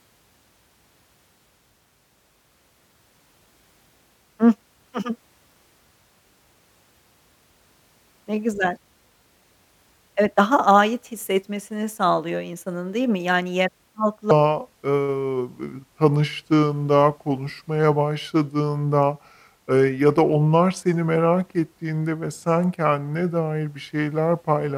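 From 14.31 s to the end, a section at the wrong speed: the speech slows to 0.744 times its recorded rate, dropping roughly five semitones, so it turns deep and drawn out. This likely comes from playback or editing against a mismatched sample clock.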